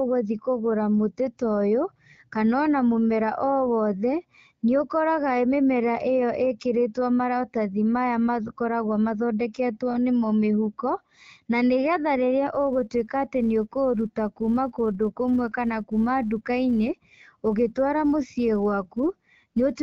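From 12.53 s, right after "na nĩgetha rĩrĩa", the speech picks up a filter restarted on every block: each block starts from silence, leaving a small tick, so you hear a 172 Hz buzz, which fits a 256-sample block, tracking the level through to the end, over the light AMR-WB coding.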